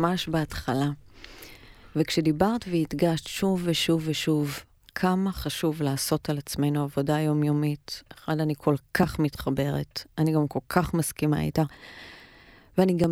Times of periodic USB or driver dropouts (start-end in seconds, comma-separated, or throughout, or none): 8.03-13.04